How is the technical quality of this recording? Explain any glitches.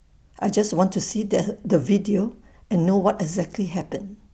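No glitches or dropouts can be heard in the speech; it comes through a call path whose high end stops near 8 kHz, which fits an Opus connection at around 32 kbps working normally.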